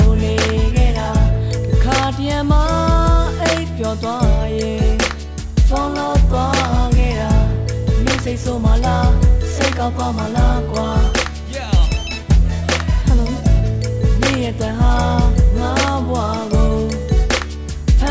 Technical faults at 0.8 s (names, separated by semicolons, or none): none